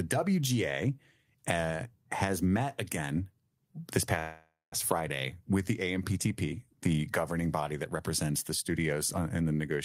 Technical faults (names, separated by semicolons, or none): call audio freeze